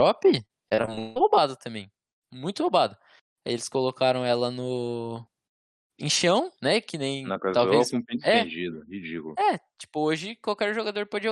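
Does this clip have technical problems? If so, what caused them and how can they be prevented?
Yes. From 0.45 to 1.18 s, just before "roubada também", the speech turns choppy and robotic from repeated packet loss. Gap after gap is patched by stretching the previous sound, the longest about 166 ms, with roughly two fifths of that stretch concealed. Unlike a single dropout, the holes recur in quick succession. A steadier network connection or a deeper jitter buffer would prevent it.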